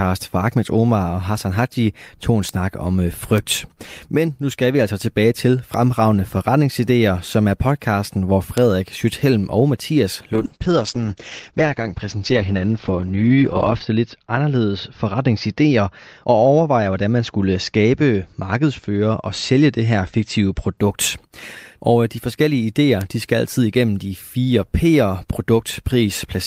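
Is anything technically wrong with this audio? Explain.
Yes. Bit error spikes at 2.49, 3.38, 5.74, 8.58, 23.01 and 25.74 s: flipped bits make one or a few samples jump and return, giving sharp ticks that show as lone waveform spikes and thin full-height spectrogram lines.

A call bitrate drop from 10.36 to 20.83 s takes the encoder from 48 to 8 kbps, bottoming out for about 3.5 s. The speech turns rough and muffled, and the spectrogram loses everything above 8 kHz.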